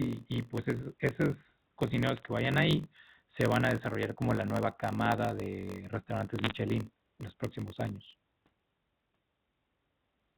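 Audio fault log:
throughout, block size mismatch (padded): A steady buzz at about 46.9 Hz runs under the speech, and everything plays slower, at 0.938 times normal speed, while the pitch stays close to natural. Each block appears to carry fewer samples than the next stage expects, and the shortfall is filled with zeros. That makes a brief silent gap at a regular rate. The rate fits 1024-sample reads at 48 kHz, and the speed ratio suggests writes of about 960 samples.
2.17–2.26 s and 6.39–6.52 s, bit errors on a digital phone line: Two short bursts of sharp ticks and crackle sit on top of the speech, and the speech between them is unchanged. The second burst is denser. The sound points to flipped bits on the telephone-coded path, at a rate well under one percent. Each flipped bit corrupts a single logarithmically coded sample, and a hit on the sign or a high-order bit throws that sample far off, which gives the click. 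The band-limited G.711 character carries through both bursts.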